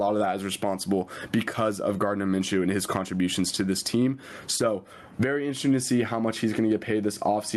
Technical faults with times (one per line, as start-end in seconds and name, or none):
0.00-7.57 gain pumping